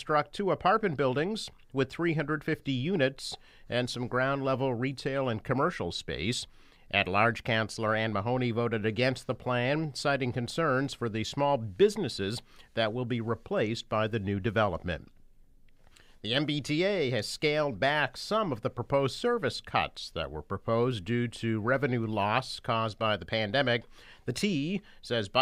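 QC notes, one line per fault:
No technical faults are audible at any point in the signal.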